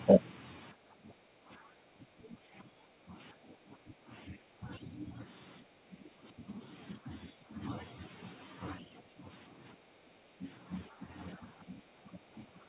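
From 0.73 to 5.24 s the talker keeps sinking, by about 15 dB at worst, then again at 5.61–6.6, 6.98–7.61, 8.8–10.45, 10.89–11.05 and 11.36–12.68 s. That's speech suppressed in double talk: the echo canceller likely couldn't tell the talker from the far-end echo while both spoke, so it turned everything down. Around 10.9–10.96 s there's a brief scrap of the other side's voice leaking through, about 15 dB below the talker. It's probably residual loudspeaker echo the canceller missed. It's short, sitting inside the band-limited call sound that has nothing above 4 kHz.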